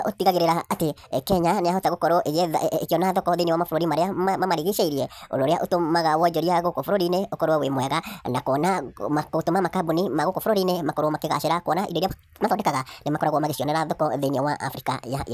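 Throughout, a wrong sample rate: playback runs about 1.45 times fast, raising pitch roughly 6.5 semitones, which fits 22 kHz audio played at 32 kHz. Speed and pitch rise together, unlike a pitch shift or time-stretch.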